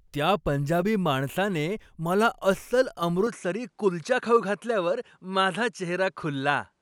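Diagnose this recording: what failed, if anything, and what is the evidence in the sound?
Input switched to a poorer device at 3.27 s, just after "पंजाबी माणसाने मला अस्सल", at the capture stage. From there on, nothing is heard above 11.4 kHz, and a new faint noise floor appears, around 50 dB down, with no gap or clear level jump. This is likely a change to a lower-bandwidth input device.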